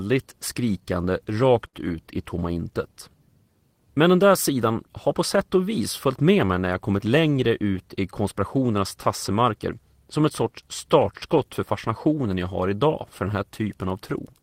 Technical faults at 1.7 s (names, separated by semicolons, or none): short stall from a late packet